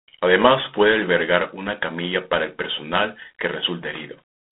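A harsh, rasping hiss rides on the speech throughout, rising and falling with its level, and nothing is heard above about 3.9 kHz. This is G.726 ADPCM damage, which fits coding at 24 kbit/s.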